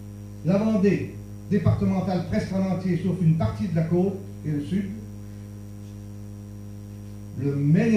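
No technical faults are audible anywhere in the audio.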